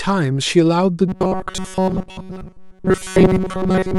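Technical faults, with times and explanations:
1.08 s to the end: robotic sound from repeated short buffers. The speech turns into a stiff metallic buzz locked at 188 Hz, likely because a slice of about 5.3 ms is replayed over and over while most of the real audio is skipped. The words are only loosely followed.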